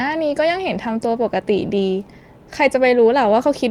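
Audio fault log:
No faults detected.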